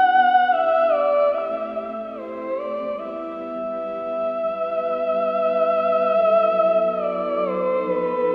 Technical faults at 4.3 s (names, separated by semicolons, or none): none